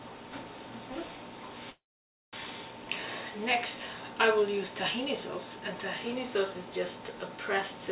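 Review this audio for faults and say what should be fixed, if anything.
A call audio freeze runs from 1.70 to 2.35 s. The sound stops and the receiver briefly extends the last fragment before settling into about 540 ms of silence; nothing is lost, and everything after resumes roughly 0.63 s late, which points to packets stalling in transit and the jitter buffer running dry as the likely cause. On a waveform this is a short decaying tail and then a flat line. On a spectrogram it is a blank vertical band across the already band-limited image, which is empty above 4 kHz. Prevent it by giving the jitter buffer more headroom and prioritising the call's packets on congested links.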